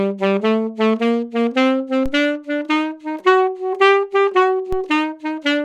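A recording of sounds carries two DC steps, at 2.06 s and 4.73 s, each heard as a low thump. The waveform's zero line jumps abruptly, then sags back as a 5 Hz high-pass bleeds the offset away. A spectrogram shows a brief low-frequency vertical smear at each step.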